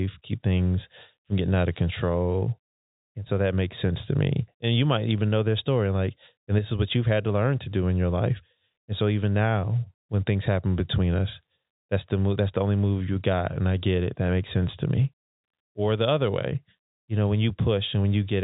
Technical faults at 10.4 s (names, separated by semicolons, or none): none